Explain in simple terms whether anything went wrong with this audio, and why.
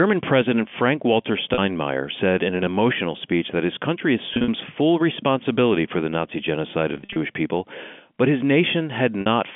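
Yes, there was packet loss with pitch repetition: chunks of the speech were lost in transit, and the receiver covered the gaps by repeating the last bit of voice. This causes brief buzzy, held-sound glitches at 1.54 s (40 ms lost), 4.34 s (100 ms scattered across 140 ms), 6.92 s (160 ms scattered across 240 ms) and 9.21 s (50 ms).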